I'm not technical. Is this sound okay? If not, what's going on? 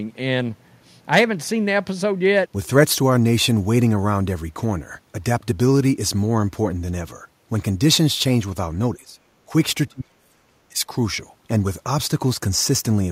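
No. The speech dips at 8.96 to 9.19 s and 9.46 to 9.52 s, then nearly vanishes from 9.88 to 10.86 s. That's likely speech suppressed in double talk, where echo cancelling turns the talker down while both sides speak.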